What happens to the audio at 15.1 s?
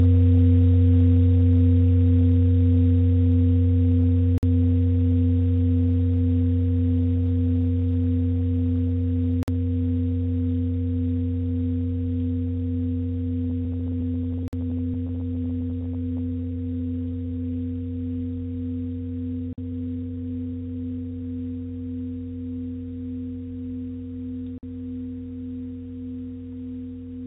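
At 15.1 s you're in the middle of repeated stalls (stutter), running 13.5 to 16.2 s: late packets keep draining the jitter buffer, so short bits get stretched and the sound drags and hiccups.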